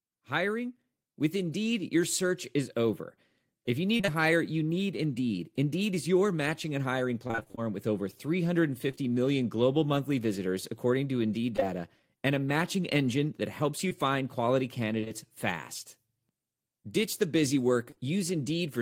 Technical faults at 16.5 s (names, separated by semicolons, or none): none